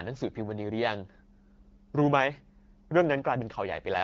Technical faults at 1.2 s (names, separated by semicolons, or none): none